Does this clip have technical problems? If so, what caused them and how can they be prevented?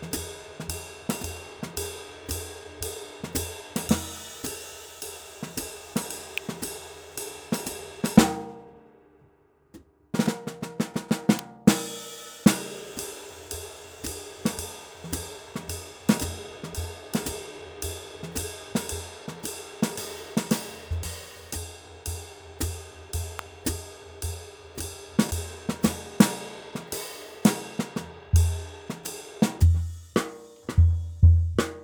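Yes. Electrical switching spikes appear at 6.38 s, 11.39 s and 23.39 s. Each is a sharp, very brief snap peaking at about -10 dBFS. They are likely arcs from a nearby switch, motor or static discharge coupling into the audio line. Keep switching equipment away from the recording chain, use balanced, shielded cabling with proper grounding, and add suppression to noisy loads.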